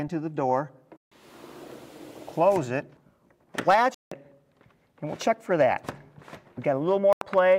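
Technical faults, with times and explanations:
0.97–1.12 s, 3.94–4.12 s and 7.13–7.22 s: Bluetooth dropout. The sound cuts to silence for about 150, 170 and 85 ms, then resumes further along, likely from packets arriving too late.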